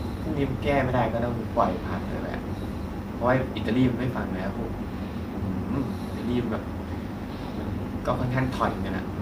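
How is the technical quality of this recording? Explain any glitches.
Nothing here trips the ear: the recording runs along without any glitches worth pointing out.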